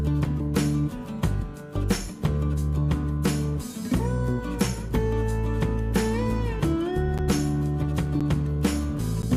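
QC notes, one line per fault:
7.18–9.23 s, periodic USB or driver dropouts: About three evenly spaced ticks, one every 1.024 s, each a gap of around 10 ms of silence cutting into the sound. A background task repeatedly stalls the USB bus or audio driver, so samples are lost.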